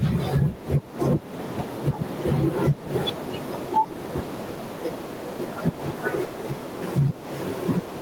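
Gain pumping runs through the whole speech clip: the room noise sits about 40 dB below the voice, and the gain swings by around 10 dB, likely from input gain set far too high with a fast limiter clamping it down.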